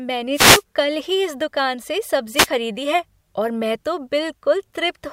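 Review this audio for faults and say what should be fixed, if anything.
Two wireless microphone noise hits occur: 0.33 to 0.63 s, just before "कल ही इस दुकान", and 2.36 to 2.47 s, right after "ही इस दुकान से". Each is a brief static swish as the FM signal fades. To prevent it, reposition the receiver antennas.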